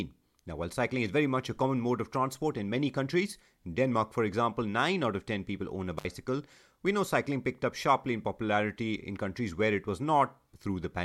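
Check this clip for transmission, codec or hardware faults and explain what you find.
One hardware fault is audible in this speech clip: an intermittent contact between 5.97 and 6.05 s. A loose plug or cable briefly loses connection for about 62 ms, so the sound drops out, with crackle at both edges and faint hiss during the gap. A waveform shows a near-flat stretch bounded by sharp spikes; a spectrogram shows a blank column edged by broadband vertical lines.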